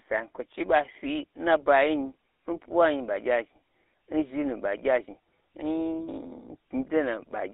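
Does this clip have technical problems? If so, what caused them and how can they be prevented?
Yes. GSM full-rate codec damage runs throughout. The speech is buzzy and gravelly, limited to 300 Hz to 3.7 kHz, consistent with 13 kbps coding. Use a wideband codec.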